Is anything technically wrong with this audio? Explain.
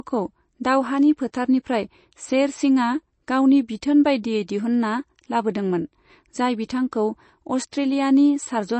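Yes. Throughout, the speech has nothing above 8.3 kHz and sounds watery and swirly, likely heavy MP3 compression at a low bitrate such as 32 kbps, starving weak frequency lines.

Pre-echo appears at 1.32, 6.91 and 7.72 s: brief hiss of 10 to 14 ms precedes sharp onsets, as block-wide quantisation noise leaks ahead of each attack.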